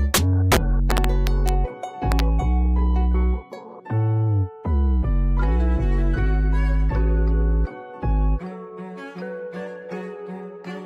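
Integer overflow breaks up the audio from 0.14 to 1.49 s and again from 2.12 to 2.20 s. In both spans the signal was pushed past the largest value the integer format can hold, by about 2 dB in the first and about 1 dB in the second. Instead of being limited at full scale, each peak wrapped around to the opposite extreme, so the loud moments turn into harsh cracks far sharper than ordinary clipping.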